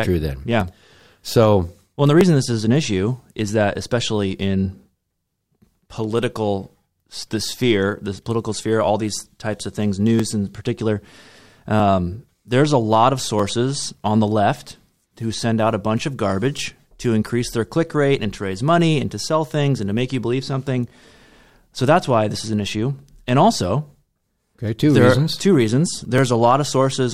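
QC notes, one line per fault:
0.61–26.18 s, clock drift buffer slips: a short click recurs every 1.6 s through the speech, about fifteen in all. This is likely two clocks roughly 0.1% apart, each slip dropping or repeating about 70 samples. The even spacing distinguishes it from random dropouts.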